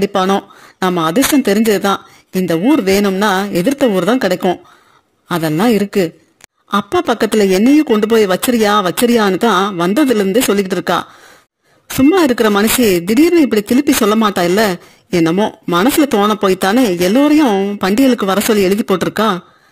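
It's a speech recording with periodic clock jitter running the whole way through. Something is wobbling the converter's sample clock at a steady rate of around 2 kHz, so every frequency in the voice picks up sidebands sitting that far above and below it. The higher parts of the voice get hit hardest, which gives the voice a gritty, metallic edge. In the pauses it disappears entirely, since there's nothing there to smear.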